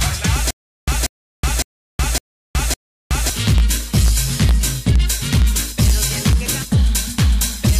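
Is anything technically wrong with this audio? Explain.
Yes. From about 0.5 s to 3.3 s there is a stutter with silent gaps. A fragment about 187 ms long plays, then about 371 ms of dead digital silence follows, and the cycle repeats five times at a steady 558 ms period. The likely cause is a stalled player or stream replaying its last buffered piece on each retry before running dry. The audio for that stretch is lost. Unlike a simple dropout, the same burst keeps returning. Unlike a seamless loop, true silence separates each repeat.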